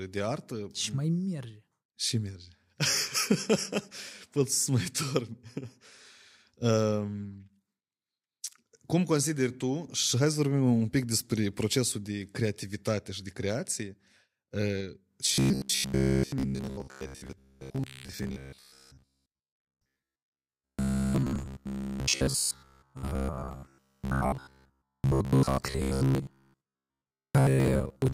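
Speech clip. From 15.35 s to 28.13 s the voice collapses into a rigid, metallic buzz pitched at 66.8 Hz, still loosely tracking the words. This is robotic sound from repeated short buffers, likely because new audio arrived too seldom and a fragment of roughly 15 ms was looped to fill the gaps. That repetition forces the fixed pitch, and most of the real audio in that stretch is skipped.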